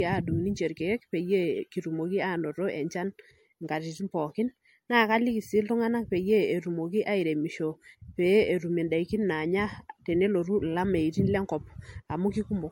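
Throughout the speech, generation loss leaves a swirly, hollow, smeared sound with blurred attacks and nothing above 16.7 kHz, likely from about five successive 64 kbit/s MP3 encodes.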